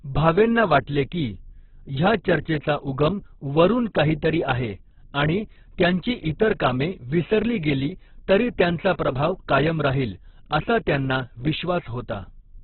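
From the start the whole clip sounds squeezed: nothing above about 4.4 kHz, with a muffled, rough, grainy texture. That's likely Opus compression at a very low rate, which fits something around 8 kbps, filling starved bands with folded or noise content instead of clean detail.

Then at 8.93 to 8.99 s there's pre-echo. A sharp attack lands late in a transform block, so noise sized for the loud part spreads into the 58 ms before it, giving a brief hiss ahead of the onset and a softened, smeared attack.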